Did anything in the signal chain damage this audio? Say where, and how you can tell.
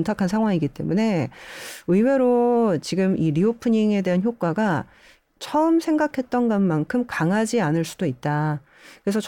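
No, nothing in the signal chain audibly damaged this speech recording, and its technical state shows no fault at any stage.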